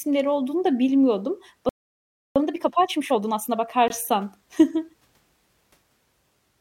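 At 1.69 s the speech just cuts out and stays silent until 2.36 s, roughly two-thirds of a second. That's a playback stall, most likely the player running dry on buffered data or its thread getting blocked, so nothing reached the output until it recovered.

Right after, from 2.36 to 3.68 s, there's time-compressed catch-up. The player is chewing through its backlog at 1.5 times normal speed by snipping out small slices and cross-fading the rest, so the speech sounds rushed but keeps its pitch.

Then from 3.88 to 3.90 s there's a 20 ms hard-edged hole of silence, a gap between stream segments. The time stamps on two neighbouring segments didn't quite meet, and the player padded the difference with silence. No audio goes missing, and the timing points to segments about 4 s long.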